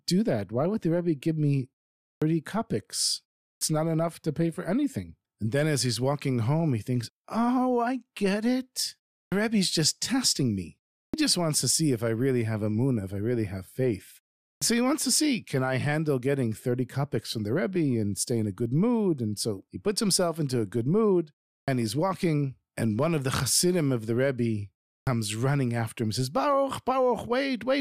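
At 2.13, 3.52, 9.23, 11.06, 14.53, 21.6 and 24.98 s, clipped start after a pause: the output device sleeps through gaps of 0.31 to 0.47 s and wakes late, swallowing 76 to 90 ms of speech onset. Examples are just after "give me", before "so he wants to", and before "he's walking". Unlike muted pauses, which only drop background in gaps, these words begin abruptly with their first sounds missing.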